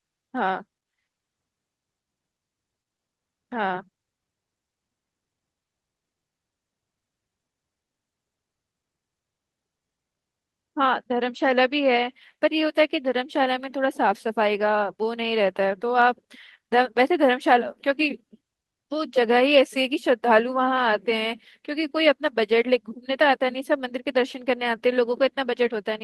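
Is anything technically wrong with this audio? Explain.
Yes. Speech runs through an Opus call path whose band stops at about 12 kHz, with coding noise that fits a rate near 32 kbps. It has one fault.

From 19.55 to 19.57 s there is a lost packet rebuilt from error correction. One 20 ms packet never arrived, but the next packet carried a low-rate backup of it. The decoder played that backup, so nothing drops out. Instead, that frame sounds briefly rougher and grainier. That distinguishes it from ordinary concealment, which guesses from the previous audio and gives a buzzy, smeared or fading tail rather than a coarse but true copy.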